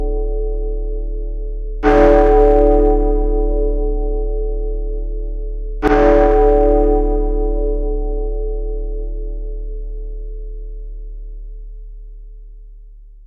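Nothing stood out as a technical fault on listening to these sounds.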